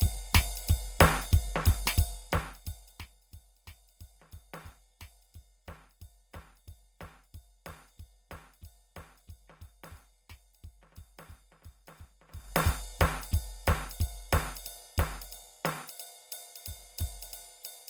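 Throughout the music, tones sound rough and grainy, with high bands filled by noise rather than left empty, and content reaching up to about 20.5 kHz. This points to Opus compression, likely in its CELT music mode at a low rate near 24 kbps.

From 1.96 to 3.16 s, zipper noise rides on a fade of roughly 25 dB. The level drops in 1 dB steps, about thirty per second, with no smoothing between them. Each step adds a small click, producing a fine ticking during the fade.

From 12.28 to 12.6 s, the level rises by roughly 25 dB in coarser 3 dB steps, again about thirty per second. The larger unsmoothed jumps give a shorter, harsher zipping.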